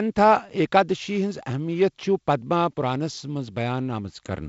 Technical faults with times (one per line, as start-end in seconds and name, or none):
none